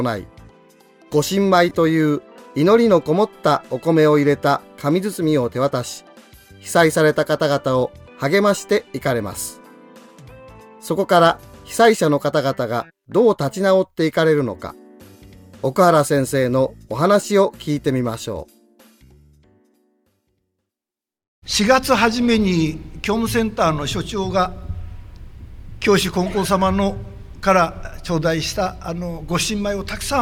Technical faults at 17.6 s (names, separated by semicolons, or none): none